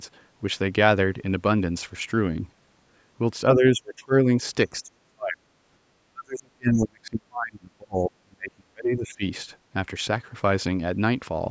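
Speech suppressed in double talk at 3.55–4.28, 4.72–5.47 and 6.12–9.23 s: the speech dips by up to about 40 dB, likely an echo canceller muting it during overlapping talk.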